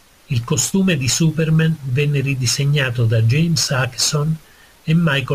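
A gritty, inharmonic fizz rides on the speech from start to finish, growing with louder and brighter syllables and sitting roughly 25 dB below the voice. This is crude rate conversion from 48 kHz to 44.1 kHz done by nearest-sample picking: samples are simply dropped or repeated without any filtering, and the irregular timing errors repeat in a cycle fixed by that ratio, producing shifted, inharmonic copies of the voice.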